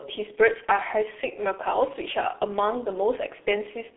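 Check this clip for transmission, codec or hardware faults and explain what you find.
Heavy G.723.1 codec damage runs throughout: the low-rate coder, at about 6.3 kbit/s, works in 30 ms frames within a 300 Hz to 3.5 kHz band, so speech sounds muffled, hoarse and smeared at consonants.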